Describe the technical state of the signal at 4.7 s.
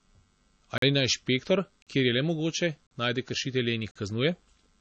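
At 4.7 s the speech still carries the MP3 compression heard throughout: nothing above 8.3 kHz, with swirly, watery smearing, likely from a starved encoder around 32 kbps, not a plain low-pass filter.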